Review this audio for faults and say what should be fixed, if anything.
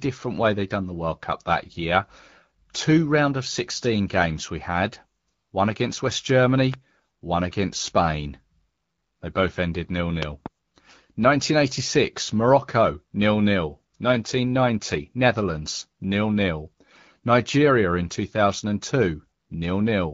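Two bursts of loud pops stand out from the speech. The first, a single sharp pulse from 6.74 to 6.76 s, peaks about 15 dB above the signal. The second, from 10.23 to 10.48 s, is a pair of pops peaking about 20 dB above it. In both, a brief electrical step or pulse, likely from a connector, switch or static discharge, is added to the signal, and the speech continues beneath it. Securing connections, grounding the setup and muting before switching would prevent these pops.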